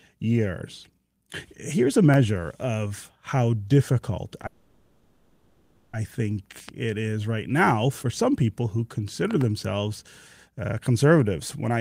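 From 4.46 to 5.95 s the speech stops and the last sound hangs on as a fading buzzy hiss for about 1.5 s, then resumes exactly where it left off. This is a call audio freeze, likely from packets held up in transit, emptying the jitter buffer. Nothing is lost, but the rest of the speech now runs about 1.5 s late.

A sharp loud pop lands at 6.69 to 6.71 s, about 5 dB above the speech, and a quick double pop follows from 9.31 to 9.43 s, about 10 dB above it. The speech continues underneath each one. These are likely voltage spikes from a plug, switch, static or driver glitch.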